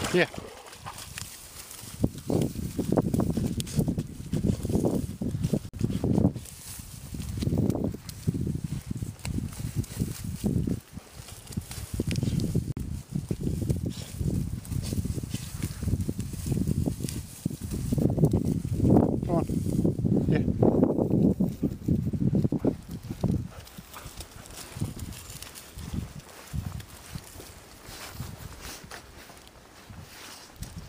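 Packets likely failed to reach the headphones in time, a Bluetooth dropout: silent 46 ms gaps at 5.69 s and 12.72 s, each fitting about two lost packets, with the audio resuming further along.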